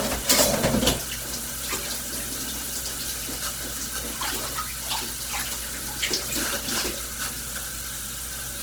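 Sounds. Throughout, tones sound grainy, rough and noisy, though the full bandwidth to 20.1 kHz remains. Likely cause: Opus compression at a low bitrate, near 16 kbps.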